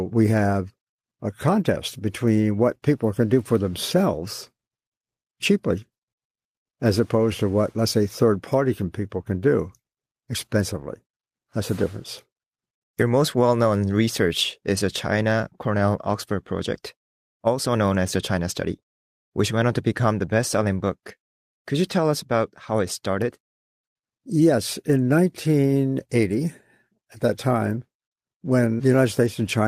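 No technical faults are audible anywhere in the recording.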